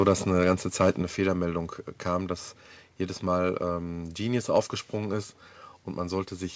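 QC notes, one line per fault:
0.0–0.12 s and 0.8–0.9 s, microphone overload: the loudest peaks, the first just before "eine ganze" and the second just after it, come out harsh and crackly, with a flattened, buzzy edge. The likely cause is an input level set too high, so the waveform tops ran into the converter's ceiling, about 3 dB over in the first burst and about 5 dB in the second, squaring off a small share of samples and adding dense upper harmonics.
1.02 s, microphone volume stepped down: shortly after the second distorted peak, the speech and the background both drop by about 4 dB in a single abrupt step, with no gradual fade. This fits the call software reacting to the overload it had just detected, likely by cutting the device's input gain in one move. Because the level shift is instant, the room tone changes audibly at that moment, even in the band-limited sound, which stops at 8 kHz.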